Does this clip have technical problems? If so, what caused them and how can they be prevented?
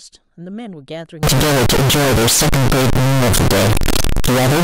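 Yes. From 1.23 s to the end, the speech turns into very loud, harsh distortion with no quieter passages, likely signed and unsigned mixed up in 16-bit samples, flipping the top bit so every zero crossing jumps full-scale. Prevent it by declaring and checking the sample format explicitly at every conversion step.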